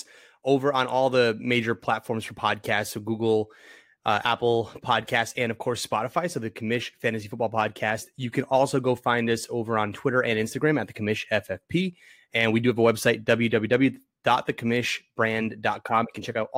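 Hard clipping appears from 4.91 to 5.20 s, again from 12.85 to 13.33 s, and as a brief touch at 13.74 s. In each spot the speech peaks exceed what a stage in the chain can pass, by about 1 dB, then about 2 dB, then about 1 dB, so their tops are sliced flat. Those squared-off peaks throw extra harmonics high into the spectrum, heard as a short crackle on the loudest moments, slightly rougher in the second stretch.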